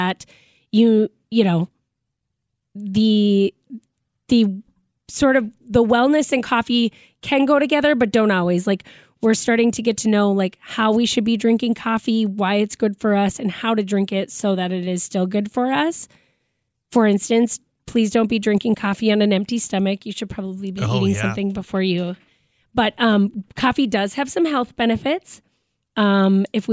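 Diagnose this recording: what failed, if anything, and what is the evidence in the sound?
Nothing in this speech recording points to a failure at any stage, so there's no fault to diagnose here.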